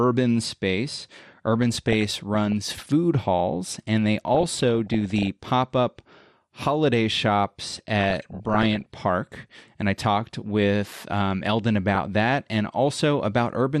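Throughout the speech the sound is dull and gurgling, with a grainy edge and a top end that seems to switch on and off. This is MP2 compression, likely the result of too few bits, which fits a low rate of around 80 kbps. Layer II divides the spectrum into 32 sub-bands and shares out a bit budget, so upper bands drop out and the remaining ones are coarsely quantised.

From 1.62 to 2.52 s, 4.35 to 5.27 s and 7.99 to 8.98 s, bubbling, squelching chirps break over the speech, and there is a much shorter burst from 11.95 to 12.08 s. This is DAB burbling. Bit errors of under one percent have slipped past error correction into the MP2 data. The corrupted samples put short blips of noise in single sub-bands, and corrupted scale factors make sub-bands leap in level for up to a frame.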